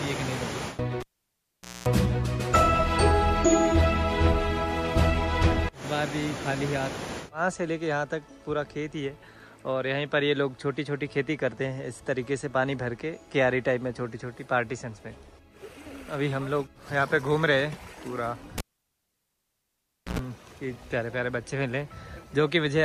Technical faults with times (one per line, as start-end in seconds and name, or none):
1.00-1.88 cable pulled and plugged in
18.58-20.19 cable pulled and plugged in